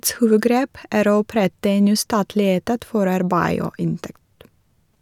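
No technical faults occur in the speech, so there is nothing to describe in time order.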